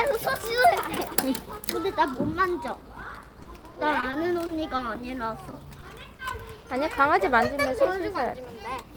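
A recording of everyday sounds turns choppy from 3.31 to 4.81 s. This is repeated packet loss (robotic sound): nine gaps, the longest 30 ms, were patched by extending the preceding sound. Brief smears or wobbles follow at 5.51, 5.81, 6.17 and 6.61 s, the last slightly longer. Each is a short concealed packet loss of 20 to 40 ms filled in from the audio just before it. From 8.34 to 8.84 s the sound runs hurried at about 107% speed with unchanged pitch. That comes from a jitter buffer speed-up trimming a few hundredths of a second to reduce delay.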